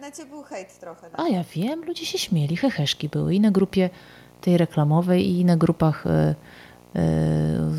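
Video or display buzz runs through the whole recording. A screen or video cable is coupling its own signal into the audio path, so a buzz at the 60 Hz field rate of the picture sits under the speech, with a fizzy hash spread above it. It stays steady and well below the speech, roughly 30 dB down, but it never lets up. It is easiest to catch in the gaps between phrases, where nothing masks it.

Microphone volume stepped up at 1.95 s, between "ja wiem" and "się śmieli heheszki były". The call software judged the microphone too quiet and raised the device's input volume in a single jump of about 5 dB, rather than easing it up gradually. Because the change happens at the input, the speech and the background both become louder at the same instant. That shared jump in level is what gives it away.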